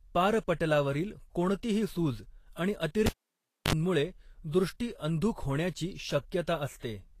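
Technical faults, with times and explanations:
Throughout, Vorbis compression: the speech sounds hissy and grainy with smeared consonants and dull treble, likely from coarse low-bitrate encoding, roughly 35 kbps.
3.06–3.73 s, cable pulled and plugged in: a pop, about 0.62 s of near silence, a 50 ms burst of 50 Hz mains buzz as the tip touches, then a pop.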